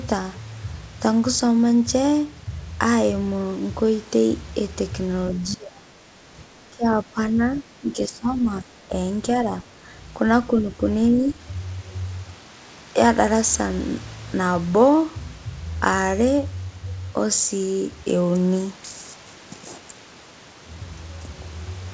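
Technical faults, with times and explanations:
5.34–6.36 s, 6.61–8.95 s, 9.63–9.90 s, 10.49–10.83 s and 11.09–11.44 s: speech suppressed in double talk. The speech sinks by about 10 to 20 dB, deepest in the first stretch. This is likely an echo canceller mistaking overlapping far-end talk for echo. It is ducking rather than clean silent gaps, so it is not packet loss.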